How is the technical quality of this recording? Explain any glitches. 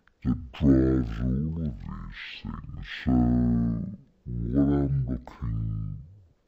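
The technical quality is poor. One fault runs through the whole recording. This is a stereo read as mono error. The left and right samples alternate, but they are played back as one channel. So everything runs at half speed and sits an octave low. A fainter mirror image also shows up in the upper spectrum.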